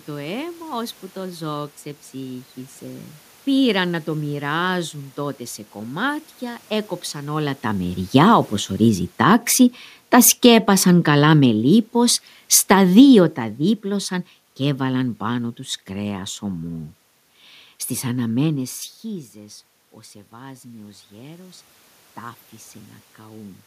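Automatic gain falling runs from 8.01 to 15.54 s. After the talker comes closer to the microphone around 7 s, the gain control judges the input too loud and eases its gain down by about 12 dB over several seconds. Voice and room noise sink together.

Automatic gain rising follows from 19.08 to 23.62 s. The talker moves away near 18.5 s, dropping the input by about 18 dB. The control slowly lifts its gain by about 7 dB, so the voice and the room background swell back up together.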